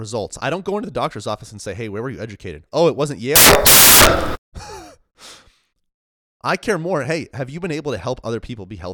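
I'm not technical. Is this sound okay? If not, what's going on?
No. From 3.36 to 4.52 s, samples were built from the wrong bytes, misreading each value, so the speech turns into loud hiss there.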